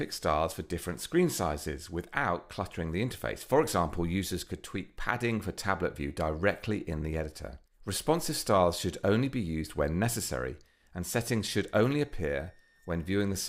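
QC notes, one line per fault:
11.48–13.49 s, switching supply whistle: a faint high whistle, roughly 35 dB below the signal, drifting between 1.78 and 1.85 kHz. On a spectrogram it appears as a thin, slightly wavering horizontal line.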